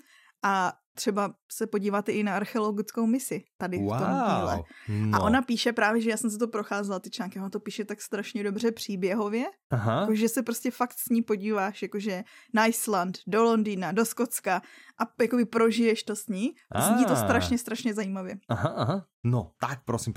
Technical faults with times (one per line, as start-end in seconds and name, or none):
none